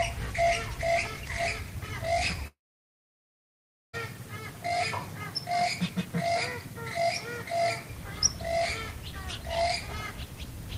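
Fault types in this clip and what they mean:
Long network dropout: At 2.47 s the sound stops abruptly. A brief continuation of the last sound carries on for roughly 80 ms, fading quickly. Silence then holds until 3.95 s, about 1.4 s in all. When the sound returns, it picks up further along, and about 1.46 s of material is simply gone. The likely cause is a network stall. The receiver covered the gap with its own fill rather than the real audio.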